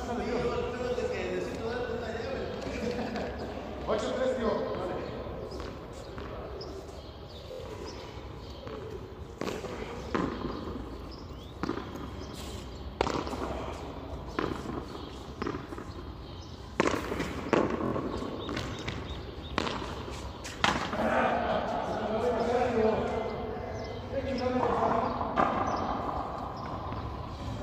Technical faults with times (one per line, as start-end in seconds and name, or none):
7.52-7.59 repeated buffer
17.86-17.93 repeated buffer